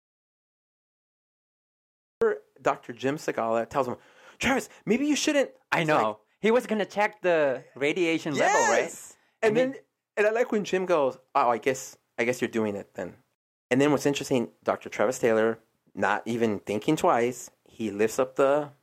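The recording opens in an audio dropout to silence that runs from the very start until 2.22 s, so the speech enters abruptly mid-flow rather than from a natural onset. Those first two seconds or so are pure silence, with no room tone or noise floor beneath them. The likely cause is a lost input, such as a disconnected device, failed link or stray mute, while the recorder kept writing empty samples, and whatever was said during it is unrecoverable.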